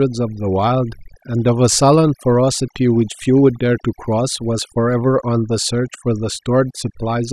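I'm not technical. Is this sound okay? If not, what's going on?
No, it's not quite right. The speech has overdone noise removal from start to finish. A cleanup tool was pushed too hard, so the background drops and breaks up into little twinkly specks.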